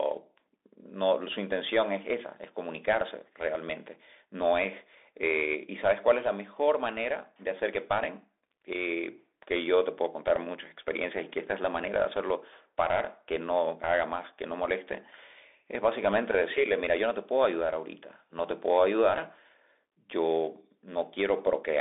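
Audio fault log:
throughout: Bluetooth CVSD headset codec. The speech sounds boxed-in and telephone-thin, with no content above 3.8 kHz, little below 300 Hz, and a plainly audible granular hiss beneath it. S sounds come out scratchy, and loud bright passages smear into distortion. This points to CVSD, likely at 64 kbps, which sends one bit per sample saying only up or down. Its adaptive step cannot keep pace with steep, loud high-frequency movement.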